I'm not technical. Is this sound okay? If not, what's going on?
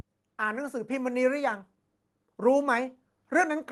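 No. Something in the recording chain added a DC offset, a constant push that shifts the whole waveform off its centre line for the entire clip. You can't hear it directly, but it wastes loudness headroom and leaves steady energy at the very bottom of the spectrum.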